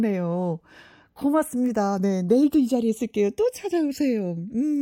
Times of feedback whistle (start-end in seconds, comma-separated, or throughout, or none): none